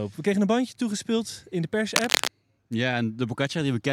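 At 1.96 s, just after "bandje toegespeeld in de", a burst of cable scratch noise cuts across the speech. It lasts about a third of a second, ending at 2.28 s. It sounds like a dense, ragged scratching and rustling, roughly as loud as the speech itself. The likely cause is a worn cable or connector being moved. Its contact resistance jumps around quickly, throwing irregular noise bursts into the signal.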